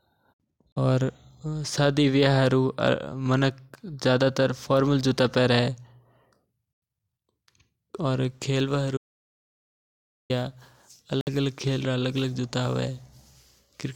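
At 0.72 s the speech drops to silence for about 41 ms, then carries on. This is a Bluetooth stall. The likely cause is radio interference holding up packets until the headphones' buffer ran empty. Playback simply paused until data arrived again. The same short hole returns at 6.73 s, lasting about 91 ms, and at 11.21 s, lasting about 59 ms. Each one is a brief, clean gap in the flow.

From 8.97 s to 10.30 s there is an audio dropout to silence. It lasts about 1.3 s. The sound cuts off mid-flow and returns just as abruptly. The gap is silent, with no room tone at all. Whatever was spoken in that stretch is lost. The likely cause is the input going away, through a failed link, a disconnect or a mute, while zeros kept being written.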